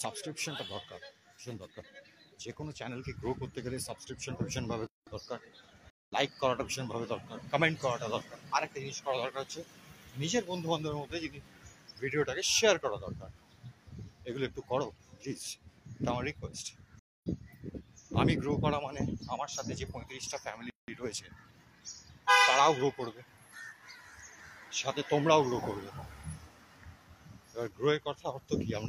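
At 4.87 s the sound drops out for about 0.2 s, and again at 20.70 s for about 0.18 s. That's likely a playback stall, with the player starved of data. The stream reconnect gaps at 5.90 s (0.18 s) and 16.99 s (0.23 s) are different. Fresh decoders restart mid-stream, skipping ahead roughly 150 ms and then about 0.3 s.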